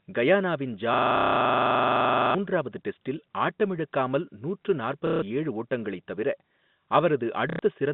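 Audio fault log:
0.94–2.35 s, system hang loop: the computer or driver stalled while the sound hardware kept replaying one ring buffer. A 42.67 ms slice, which fits a 2048-sample buffer, repeats 33 times, giving a rapid rattling stutter at 23.4 Hz and losing roughly 1.5 s of speech.
1.17–1.35 s, 5.07–5.22 s, 7.5–7.59 s, packet loss with last packet repeated: packets failed to arrive, so the receiver replayed the last good one until new data came. The gaps of 180 ms, 150 ms and 90 ms buzz robotically at about 33 Hz, which fits 30 ms packets.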